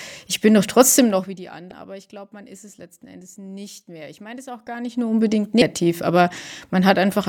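At 1.71 s, right after "trotzdem noch wie die", the speech breaks into a brief glitch from damaged data in a compressed stream. Corrupted bytes made the decoder misread a frame and lose sync, and another such glitch occurs at 5.62 s after "gar nicht nur unbedingt".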